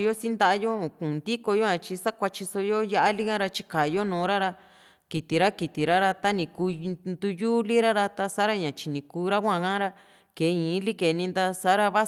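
A recording of speech, and there's nothing technically wrong to point to anywhere in it.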